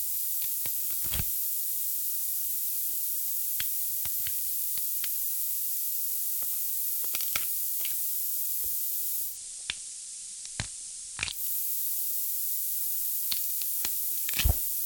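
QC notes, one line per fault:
Throughout: low bit depth with noise shaping. Only 3 bits carry the sound, and the rounding error is pushed upward in frequency, leaving a steady hiss roughly 15 dB below the signal. A spectrogram shows a noise floor climbing steeply toward the top; the waveform looks coarsely stepped.
9.23–11.45 s: digital radio blending to analogue. The receiver cross-fades to the FM broadcast over 142 ms and later back, with the level dropping about 2 dB and hiss added roughly 30 dB below the signal. The spectrogram shows a lifted broadband floor between the blends; the waveform steps down.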